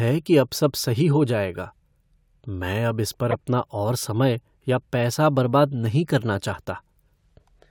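Speech with two corrupt frame decoded faults. A faint error at 1.55 s. A loud error runs from 3.31 to 3.34 s. Each sounds like one or two damaged compressed frames played anyway, with energy misplaced across frequencies.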